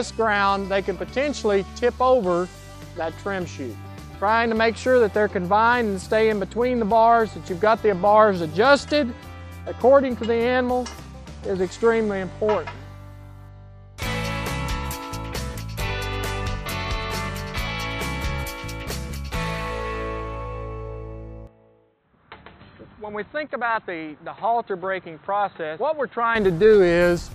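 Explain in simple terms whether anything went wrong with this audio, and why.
From 21.47 to 26.35 s the sound turns dull and boxy, with nothing above about 4.1 kHz. It gets a little quieter and picks up a faint new hiss, with no gap at the switch, so it is likely an input switched to a poorer device, not just filtering.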